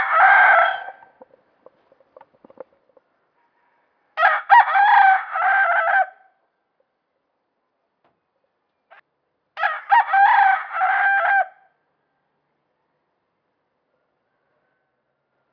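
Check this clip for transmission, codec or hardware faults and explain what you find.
No transmission, codec or hardware faults turn up in this clip.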